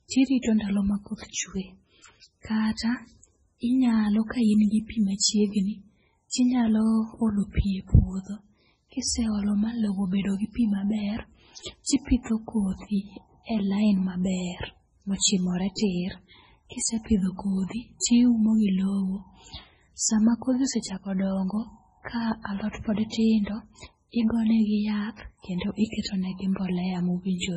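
From the start the whole speech clip carries heavy codec damage, most likely MP3 compression at a very low bitrate, in the region of 16 kbps. Nothing survives above 10.5 kHz, so a spectrogram shows a flat ceiling there. Below it, weak frequency lines blink on and off between frames, leaving a speckled, patchy texture. To the ear the speech sounds watery and swirly, with metallic sibilants and smeared onsets.

Pre-echo appears at 0.42 s, just before "ndalo ma", and again at 6.30, 11.84, 15.75, 18.00 (right before "tiumo gi") and 26.02 s. Each time a sharp onset lands late in a codec block, and the noise budgeted for the loud part spills backwards, lasting 26 to 40 ms. On the waveform a faint fuzzy skirt rises ahead of the attack. On a spectrogram a broadband smear precedes it, heard as a brief hiss before a softened onset.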